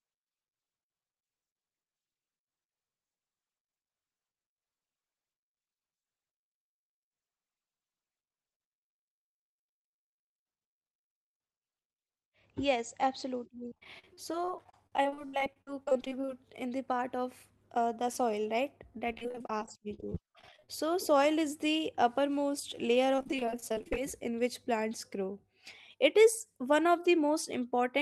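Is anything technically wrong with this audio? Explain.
Yes. Repeated packet loss (robotic sound) occurs at 13.68–16.29 s, just before "in the part of", then at 19.12–20.69 s and 23.16–23.97 s. Packets kept going missing or arriving late, and each hole, up to 70 ms, was patched by extending the previous sound. About a third of each stretch is this stand-in audio, so the sound turns choppy, with fragments missing. The call path's band limit, which fits a wideband codec with an 8 kHz bandwidth, leaves these stretches dull as well.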